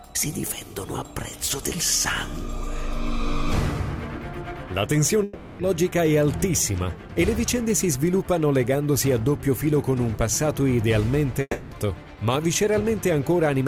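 At 5.23 to 5.62 s, and again at 11.41 to 11.74 s, the sound dissolves into a fading buzzy smear, the second ending in a brief silence, then resumes with material missing: likely a long network dropout, where the receiver stretched the last audio to cover roughly 0.36 s and 0.3 s lost.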